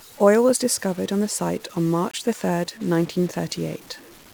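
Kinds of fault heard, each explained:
Stuck bit: Added noise rides on the speech throughout, and the pauses between phrases are filled with a gritty noise floor instead of going quiet. The likely cause is a single data bit held at a fixed value by a broken line or converter, so roughly half the samples are pushed off by that bit's weight in a pattern that follows the waveform. Near-silent passages keep crossing zero, and the stuck bit turns each sign change into noise.
Gap between stream segments: One hard-edged hole of silence, 21.7 ms long, falls at 2.11 s, between "on the site on" and "the third nineteen". It happens where the time stamps of two consecutive segments fail to meet. The player covers the missing interval with silence, so the sound cuts out abruptly and then resumes with nothing lost. The position fits a boundary between 2-second segments.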